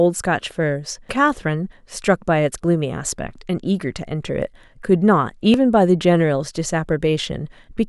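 At 1.09 s there is damaged data in the compressed stream: the decoder hits corrupted bytes, loses frame sync and searches for the next valid header, producing a brief glitch in the speech.

At 2.55 s and again at 5.54 s the speech skips abruptly, each time dropping only a very short slice before the two sides butt together. The three-second spacing points to audio missing between chunks, likely lost as the recorder closed one block and opened the next.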